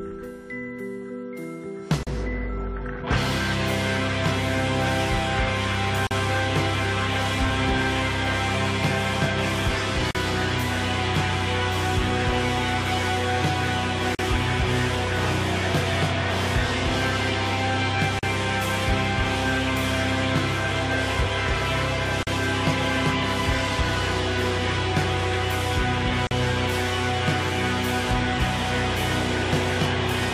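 Short dropouts of about 40 ms land at 2.03, 6.07, 10.11, 14.15, 18.19, 22.23 and 26.27 s: a gap at a join of encoded pieces, where each separately encoded chunk's start delay and end padding weren't trimmed.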